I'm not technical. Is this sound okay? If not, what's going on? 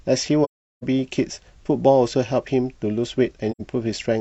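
No. The speech drops out twice, from 0.44 to 0.83 s and from 3.51 to 3.61 s. This is AAC frame loss with muting. Small chunks of the compressed audio never arrived, so the player filled those gaps with silence. The first hole is long, close to 0.4 seconds. The second lasts under a tenth of a second. Each gap fades out and back in smoothly.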